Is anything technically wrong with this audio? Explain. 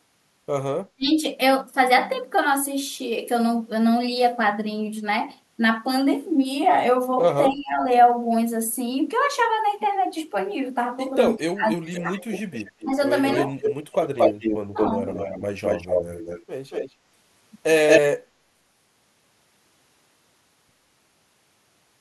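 Yes, the speech carries three kinds of fault.

Clock slip clicks run from 0.15 s to 21.95 s. Faint ticks come about every tenth of a second, roughly 200 in all, each a single-sample jump. The likely cause is two unsynchronised clocks differing by around 200 ppm. Unlike packet-loss clicks, they are evenly spaced and vanish in silence.

Speech suppressed in double talk occurs at 0.93–1.12 s, 7.49–7.83 s, 11.36–12.10 s, 12.84–13.51 s and 14.19–14.95 s. The talker dips by up to about 35 dB, most deeply at the first event. An echo canceller likely ducked both sides while they spoke together.

Echo leak runs from 11.94 s to 16.93 s at about 5 dB below the speech, then returns briefly at 17.88–18.01 s at about 5 dB above it. A copy of the voice returns 230 ms late, likely loudspeaker pickup the canceller failed to remove. The fixed delay separates it from room reverberation.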